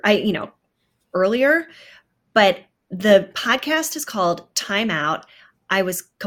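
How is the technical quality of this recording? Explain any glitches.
No technical faults are audible anywhere in the recording.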